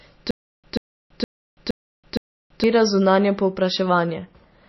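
A stalled player or stream likely interrupted this speech clip from 0.31 to 2.64 s, producing a stutter with silent gaps: a 136 ms fragment replays five times, each followed by 330 ms of digital silence, so the burst returns every 466 ms while the audio meant for that stretch is lost. Throughout, heavy MP3 compression starves the encoder of bits, which fits a bitrate near 26 kbps. It cuts everything above 5.8 kHz and switches weak frequency lines on and off between frames, leaving the sound dull, watery and swirly with smeared attacks.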